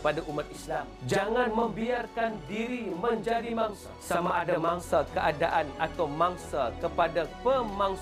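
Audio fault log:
0.46 to 4.83 s, channel delay (doubling): one channel arrives about 40 ms late, and when the two are folded to mono the late copy sits at equal level just behind the original, so the sound takes on a doubled, slapback quality, consistent with a buffer offset of roughly that length.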